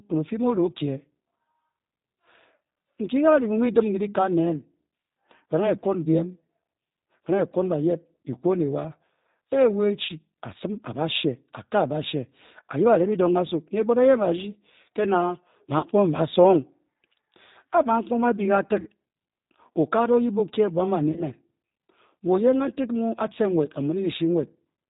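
Right through the speech you can hear the G.729 codec at work, and the damage is plainly audible. The top end stops dead around 4 kHz, and the voice has that slightly rough, synthetic edge you get when speech is rebuilt from a vocal tract filter, a pitch predictor and a few pulses per frame. The sound points to the G.729A variant at about 8 kbit/s.

Then there are four spots of VoIP packet loss concealed by the speech codec, at 10.05 to 10.11 s, 15.79 to 15.85 s, 18.80 to 18.88 s and 21.12 to 21.24 s. About 40 ms of audio goes missing in the first, second and fourth, which fits two lost 20 ms packets, and about 60 ms in the third. The decoder fills each gap by stretching its last pitch and filter, so the voice turns into a brief, fading smear. Since each frame builds on the one before, it stays weak and off for a moment after the audio resumes.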